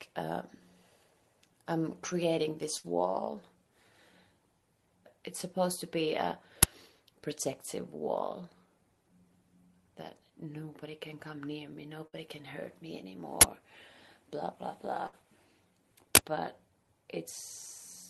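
At 2.77 to 2.86 s, 12.07 to 12.16 s and 15.07 to 15.15 s there's a burst of packet loss: about 60 ms goes missing, papered over by a fading held buzz or hiss before the audio jumps ahead. Interleaved with these, at 6.63 s, 13.41 to 13.44 s and 16.15 to 16.18 s, an uninitialised buffer gets played as loud, harsh digital noise, with lengths that fit 512- and 1024-sample blocks.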